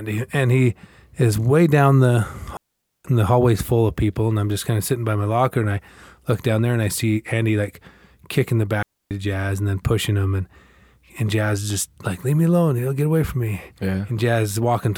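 A digital wireless link lost too much data and its receiver muted twice: from 2.57 to 3.05 s (0.48 s) and from 8.83 to 9.11 s (0.28 s). Each digital wireless dropout cuts the speech into a clean, near-silent hole with a very short fade and no noise burst on either side.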